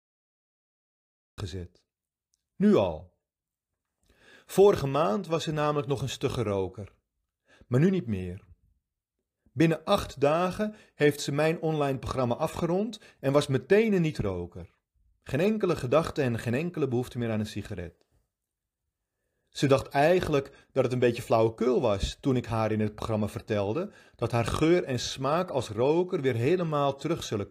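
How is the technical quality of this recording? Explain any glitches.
There's one clear glitch, and it's right at the top. From 0 to 1.38 s you get dead digital silence, then the speech jumps in mid-sound: a cut-off start. Capture or streaming began late, so the first syllable has no natural attack or lead-in and just appears abruptly.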